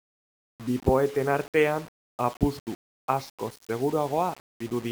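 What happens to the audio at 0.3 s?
At 0.3 s the speech carries low bit depth without dither, present across the whole clip: a grainy, signal-following distortion roughly 25 dB below the speech, likely from rounding to about 6 bits. The waveform shows visible stair-steps; the spectrogram shows broadband grit tracking the speech.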